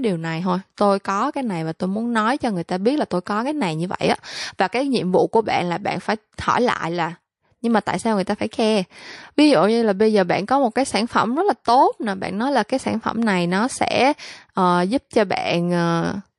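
Speech runs the whole way through with plainly audible MP3 compression: the upper band sounds watery and swirly as weak frequency components drop in and out between frames. S sounds pick up a metallic chirp, and consonant onsets smear. The amount of damage fits a low bitrate of around 48 kbps, which is the likely cause. Between "điều này thôi" and "tôi có cái này", at about 0.75 to 0.77 s, there is pre-echo. A hiss about 17 dB above the surrounding floor spreads over roughly 27 ms ahead of a sharp attack, and the attack sounds softened. The encoder spread the quantisation noise meant for the loud onset across its whole transform window of about 48 ms. The hiss suggests it stayed on long blocks instead of switching to short ones for the transient.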